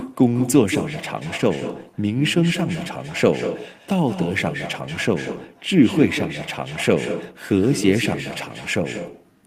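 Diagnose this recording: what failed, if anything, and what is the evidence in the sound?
Echo with no canceller, throughout the speech: call processing fails to remove the far loudspeaker's pickup, so every phrase returns about a fifth of a second later, about 9 dB quieter.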